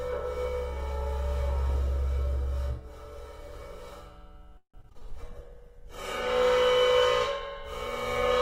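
From 4.57 to 5.03 s the audio breaks up with repeated packet loss (robotic sound). Five separate gaps fall inside this half-second span, the longest about 162 ms. Each hole is patched by extending the sound that came just before it, so about half of the span is concealment rather than real signal, roughly 229 ms in total, with a further 80 ms simply missing. The result is choppy, with pieces of the sound absent and a synthetic, robotic quality.

From 5.27 to 6.40 s a call bitrate drop sets in. The encoder has been told to spend far fewer bits, which fits a fall from about 96 kbps to around 16 kbps, held at the lowest level for roughly 1.05 s. At that rate Opus codes the signal coarsely and removes the high frequencies, so the sound turns rough, watery or muffled. It clears again by 6.40 s, as the bitrate recovers before the clip ends.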